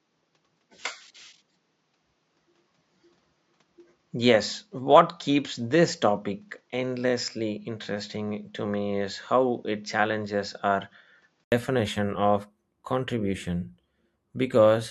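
A speech recording whose input was likely switched to a poorer device for the opening stretch, from 0.0 to 11.52 s: nothing above 7.6 kHz passes, so the voice sounds dull, with a faint new noise floor well below it, then an 80 ms silence as the fuller device returns at the same level.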